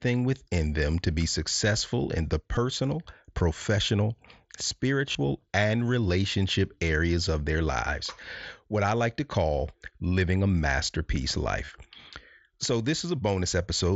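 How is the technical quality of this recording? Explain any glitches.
The recording has three short dropouts from concealed Bluetooth headset packet loss, all carried over the mSBC wideband headset link, whose light graininess on louder syllables and 8 kHz ceiling are audible throughout. Voice packets failed to arrive from the headset, and the receiver filled each gap by repeating the closest-matching slice of the preceding waveform. At 2.55 s about 15 ms was patched, which fits two lost packets, and comes through as a very short buzzy tone. At 5.12–5.15 s and 11.65–11.68 s about 30 ms each, which fits four packets, turns into a brief buzzy, steady-level tone with a slight warble as the real speech resumes.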